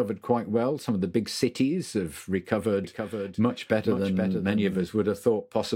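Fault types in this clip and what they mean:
Doubled audio track, 2.84 to 4.84 s: right after "the big cities have", a second full-band copy of the speech trails by about half a second, roughly 5 dB quieter, dry and abruptly switched on and off, likely from a slower duplicate capture path.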